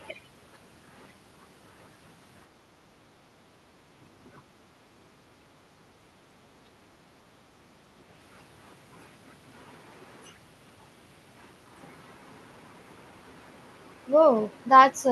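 From 2.47 to 4.03 s and 4.41 to 5.47 s, the room sound dips by about 10 dB and about 8 dB. This is background gated by the echo canceller, which turns the microphone down while the loudspeaker plays.

At 6.63 to 6.73 s, the speech briefly drops out, by roughly 30 dB. This is likely speech suppressed in double talk, with both sides talking at once.

The background gating returns at 7.23 to 7.46 s, about 8 dB down, and at 7.87 to 7.95 s, about 6 dB down.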